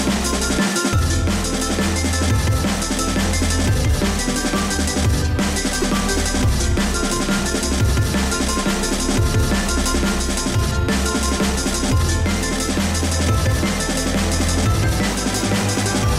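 At 2.70 s a repeated buffer is heard as a single sharp click: the output device did not get fresh audio in time, so it replayed the last block once, about 2.7 ms long, which fits a 128-sample buffer. At 5.82 s the same block plays four extra times, giving a brief buzz at roughly 370 Hz. Unlike a dropout there is no gap or silence, and nothing appears to be skipped.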